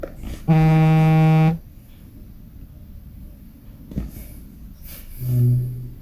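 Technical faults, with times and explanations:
No technical faults are audible.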